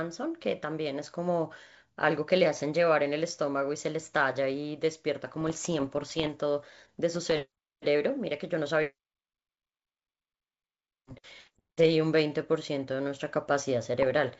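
Bit errors on an ADPCM link corrupt this speech in four bursts: 5.41 to 6.36 s, 7.14 to 7.46 s, 11.34 to 11.71 s, and 13.99 to 14.18 s. Flipped bits, a few per thousand, knock the decoder's step size and predictor off track, so each error rings on for some milliseconds. The result is pops and rough, gritty patches with brief jumps in level, over otherwise clean G.722-style wideband audio that points to the full 64 kbit/s mode.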